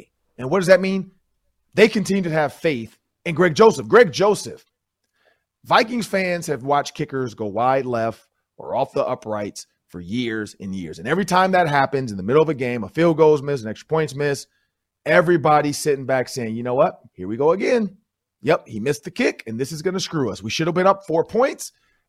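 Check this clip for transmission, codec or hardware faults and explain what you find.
Nothing in the transmission, codec or hardware chain stands out here, so there's no fault to report for this speech recording.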